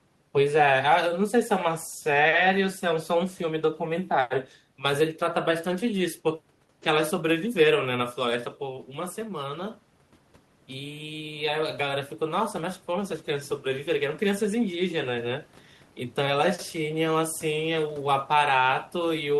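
Automatic gain rising runs from 10.69 to 15.53 s in this speech recording. After the talker moves away from the microphone around 8 s, the input falls by about 9 dB. The gain control reads that as a signal that is too quiet and lifts its gain by about 6 dB over nearly five seconds. The voice and the room noise behind it swell together, which marks the rise as gain rather than the talker.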